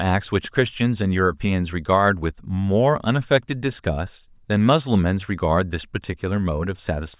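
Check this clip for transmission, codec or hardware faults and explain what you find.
No faults turn up in this clip.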